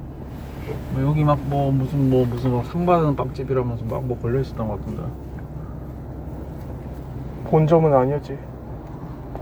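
Everyday sounds, no audible faults.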